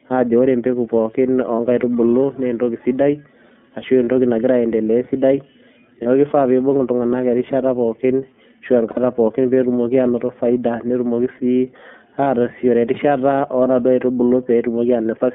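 The whole recording passed through the iLBC codec, a narrowband VoIP coder whose rough, synthetic edge fits its 13.33 kbps, 30 ms frame mode. The line carries only about 200 Hz to 3.5 kHz, so the speech sounds thin and muffled, with plainly audible coding damage.

Lost iLBC frames then break in five times. At 1.56, 4.05, 6.02 and 12.24 s, gaps of about 30 ms each point to a single missing frame. At 8.9 s a 60 ms gap suggests two frames in a row. The decoder fills each gap by repeating the last pitch cycle with added noise, producing a brief held, buzzy vowel before the voice snaps back to normal.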